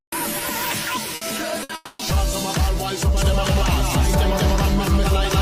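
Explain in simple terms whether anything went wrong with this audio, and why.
A burst of packet loss hit twice, at 1.15 to 1.24 s and 1.63 to 1.72 s: several chunks of audio in a row never arrived. Each time the player stretched the last sound for about 60 ms, fading it to a buzz or hiss, then jumped ahead, skipping another 60 ms.

Right after, from 1.75 to 2.02 s, there is a long network dropout, likely a longer outage in the connection. The player filled the hole by holding and fading the last sound for about 240 ms, never reaching full silence, and then the audio resumed with that stretch gone.

From 3.17 s to the end there is a doubled audio track, likely the sound being picked up a second time through a slower route. A second, equally loud copy trails roughly a fifth of a second behind, starting abruptly and sounding like a clean, dry echo.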